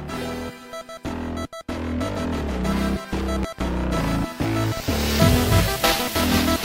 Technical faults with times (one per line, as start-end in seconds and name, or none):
3.43-3.62 loud pop
4.77-4.81 loud pop